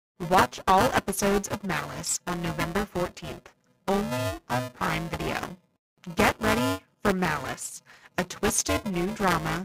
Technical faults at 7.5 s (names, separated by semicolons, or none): buffer tearing